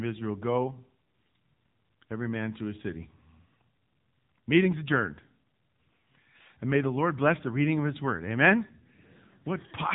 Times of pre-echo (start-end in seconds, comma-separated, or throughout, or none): none